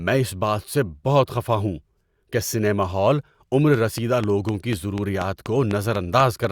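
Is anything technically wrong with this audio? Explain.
Yes. From 3.74 to 6.45 s there is a train of clicks: about ten evenly spaced ticks, four per second, likely from interference. They peak about 10 dB above the speech and show as thin spikes on the waveform and full-height vertical lines on a spectrogram.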